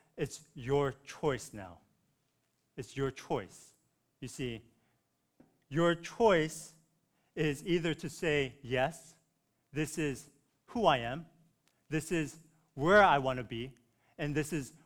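A speech clip with a buzz at about 172 Hz throughout, the signature of a filter restarted on every block. The filter clears its memory at each block boundary and begins again from silence, so every block opens with a tiny transient. At this rate that fits a 256-sample block. Unlike mains hum, which stays steady through pauses, this buzz rises and falls with the speech level and disappears when the signal does.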